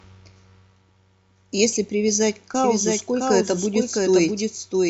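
A second capture path, likely one running slower than the main feed, gets mixed back in at 2.64 s. The result is a doubled audio track through to the end of the clip. From that point the speech is joined by a full-band copy of itself trailing roughly 0.7 s behind and around 5 dB quieter. The copy cuts in abruptly, with no decay or room colour, so it sounds like a second, slightly fainter voice repeating the same speech out of step.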